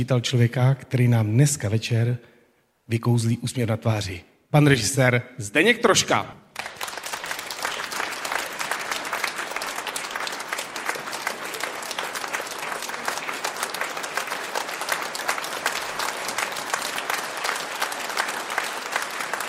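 No technical faults can be heard anywhere in the recording, and the signal stays steady and intact throughout.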